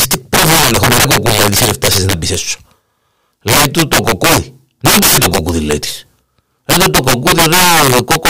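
Integer overflow runs through the whole speech clip. The signal is driven about 16 dB past full scale, and instead of being limited, each sample that exceeds the largest integer wraps around to the opposite sign. Around 7 percent of samples cross that limit, so every loud peak flips across the full range. The result is violent, sharp cracks on the louder syllables, far harsher than ordinary clipping, while quieter passages pass intact.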